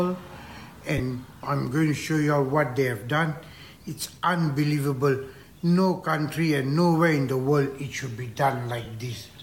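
Lost LE Audio frames occur twice: Bluetooth frames never reached the LC3 decoder, so it filled the gap by repeating the last good spectrum with randomised signs. From 0.98 to 1.00 s about 15 ms is lost, which fits two 7.5 ms frames, and at 8.85 s about 7.5 ms, one frame's worth. Each gap is too short to fade, so it comes through as a brief noisy smear where any tonal content momentarily loses its clarity.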